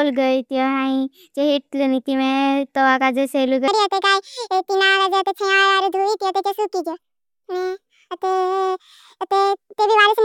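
From 3.68 s to the end, a wrong sample rate makes speech 1.5 times faster and about seven semitones higher, consistent with 32 kHz audio played at 48 kHz; spectrogram harmonics shift upward and compress in time.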